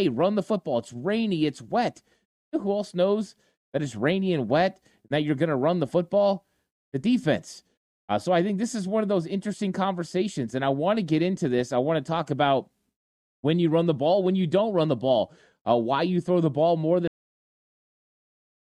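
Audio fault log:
17.08–18.78 s, cut-off end: the speech stops abruptly at 17.08 s, partway through a sound, and the remaining 1.7 s is flat digital silence. There is no natural decay or fade; the waveform simply ends mid-level. This is what happens when the final buffers of the recording are never written out or played back, so the tail of the signal is lost and the file pads out with silence to its end.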